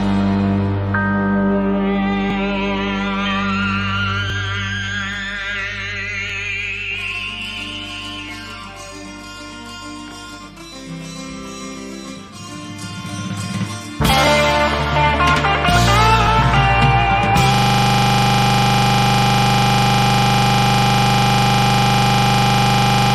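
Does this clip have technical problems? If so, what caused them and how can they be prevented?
Yes. Overlap between stream segments causes brief clicks or micro-skips at 2.30, 4.30, 6.30, 8.29, 10.28, 14.27 and 16.27 s, spaced about every 2 s, matching 2.0 s segments whose timestamps overlap, so the player discards a few milliseconds of real audio at each boundary. Prevent it by generating segment timestamps from a continuous sample counter so boundaries align exactly.

A system hang loop starts at 17.54 s and continues to the end. A 40 ms stretch of audio repeats identically at 25 Hz, heard as a steady buzz, because the system stalled while the audio hardware kept replaying its ring buffer. Prevent it with a watchdog that mutes or stops output when the buffer is not refilled.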